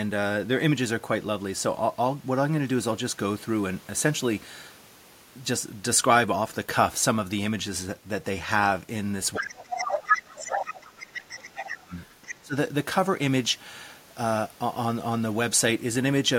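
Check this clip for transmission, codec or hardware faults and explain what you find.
Two echo-canceller faults appear between about 9.3 and 12.6 s, both tied to the far end talking over the near-end speech.

Other side's voice leaking through occurs at 9.33–10.21, 10.44–10.88, 11.15–11.36 and 11.99–12.33 s. A second voice sits under the speech, first roughly as loud as it, then fainter. This is likely loudspeaker echo left in the microphone. Unlike crosstalk, it comes in scraps.

Speech suppressed in double talk occurs at 9.39–11.93 s and again at 12.31–12.56 s. The talker dips by around 20 dB, then briefly by about 30 dB, only while the other side talks. The likely cause is the canceller ducking both voices. Unlike a network dropout, it follows the other side's talking.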